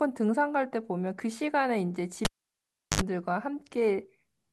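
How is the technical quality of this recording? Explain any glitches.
The recording has one clear glitch, a cable pulled and plugged in. At 2.25 s a pop cuts the speech. About 0.71 s of near silence follows. Then 50 Hz mains buzz sounds for about 70 ms as the plug tip makes contact. A second pop at 3.01 s brings the sound back.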